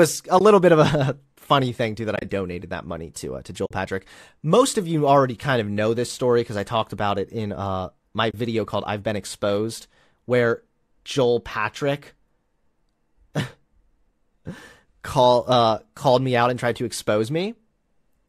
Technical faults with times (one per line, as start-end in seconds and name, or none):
0.39-0.41 AAC frame loss with muting
2.15-2.24 AAC frame loss with muting
3.65-3.71 AAC frame loss with muting
8.31-8.34 AAC frame loss with muting